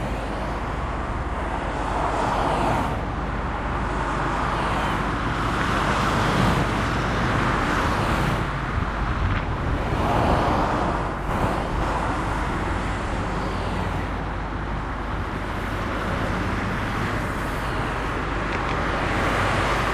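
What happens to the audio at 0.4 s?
At 0.4 s the audio carries mains hum, present from start to finish. Power-line voltage leaks into the signal through a ground loop or a nearby transformer, leaving a steady 50 Hz drone with low harmonics that sits only about 10 dB below the sound.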